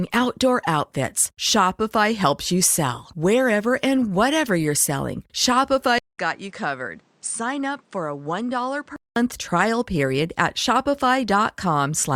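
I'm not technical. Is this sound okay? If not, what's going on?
No. An input switched to a poorer device from 5.98 to 9.16 s: the recording likely changed to another microphone or headset mode. After a 0.2 s silence at the switch, the speech loses everything above 9.5 kHz, gets quieter, and picks up new background noise.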